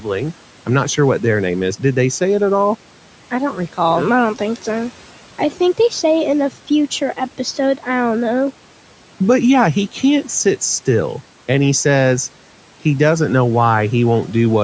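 Speech, with two places where the noise suppressor cut into the speech. From 0.0 to 0.33 s, around 150 ms of sound is pulled down by up to about 12 dB, so the opening sounds faint and swallowed. From 5.38 to 5.6 s, roughly 100 ms dips by up to about 8 dB. In both spots the suppressor treated low-level speech as background and turned it down along with the room noise, which sits about 20 dB below the speech.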